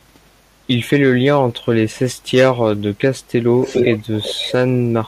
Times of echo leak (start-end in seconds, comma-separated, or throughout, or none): 3.57-4.53